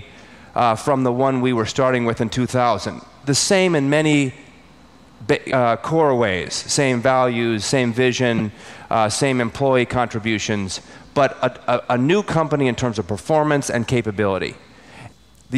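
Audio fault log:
5.50–5.53 s and 8.37–8.41 s: broken MP3 bit reservoir. The audio skips ahead with a brief glitch lasting about one 26.1 ms frame, likely because dropped frames left the next frame reading another frame's bytes.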